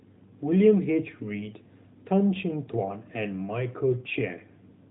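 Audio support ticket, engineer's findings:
No faults found in this speech recording.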